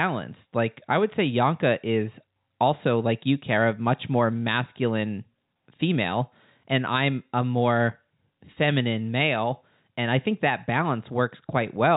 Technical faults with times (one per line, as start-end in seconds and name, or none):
none